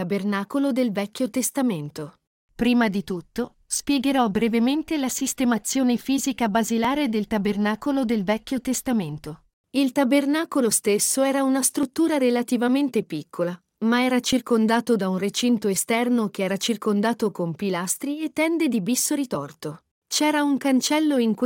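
Tiny skips occur at 1.86, 4.35, 6.85, 11.83, 14.33, 16.82 and 19.31 s, one just after "di tutto spiegherò". This is likely audio missing between chunks. At these 2.5 s chunk boundaries, a few milliseconds vanish. The two sides join directly, causing a brief jolt.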